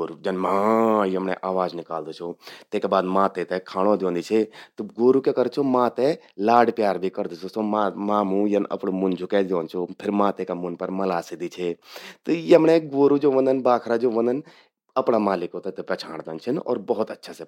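No technical faults can be heard at any point in the recording.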